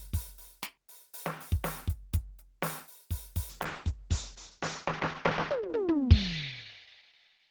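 A call bitrate drop hits this music clip at 3.51 s and lasts to the end. The encoder was pushed to far fewer bits, which fits a fall from 32 to 8 kbps. The top end narrows from 20 kHz to 8 kHz, leaving coarse, muffled sound at its worst for about 2 s.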